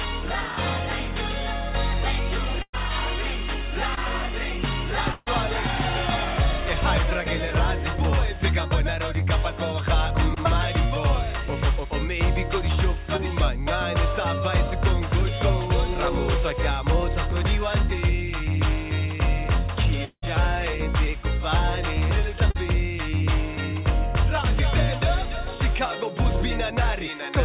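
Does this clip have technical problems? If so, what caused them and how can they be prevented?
Yes. From 2.62 to 5.28 s there is repeated packet loss, heard as choppy sound. Three holes, the longest 140 ms, are patched by stretching the last sound. A steadier network or a deeper jitter buffer would prevent this.

Short concealed packet loss occurs at 10.34–10.38 s, 13.17–13.21 s and 22.50–22.56 s. Each gap of 20 to 40 ms is filled from the preceding sound, leaving a brief smear. Forward error correction or packet redundancy would cover such single losses.

At 20.05–20.24 s the sound turns into a fading buzz or hiss, then about 70 ms of silence, and returns with a piece missing. The likely cause is a long network dropout. A more stable connection, such as wired rather than wireless, would prevent it.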